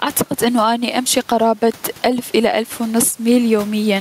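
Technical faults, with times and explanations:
Throughout, gain pumping: the room noise sits about 33 dB below the speech, and the gain swings around 10 dB. The likely cause is input gain set far too high, with a fast limiter clamping every loud sound.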